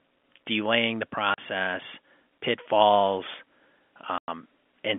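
At 1.34 s, just after "delaying the", the speech drops out for 40 ms, and at 4.18 s a longer gap of 100 ms follows. Both are packet loss filled with silence: the receiver had nothing to play and inserted silence. The gap lengths fit lost 20 ms packets. Each hole starts and ends abruptly. The narrow G.711 telephone band is audible around the gaps.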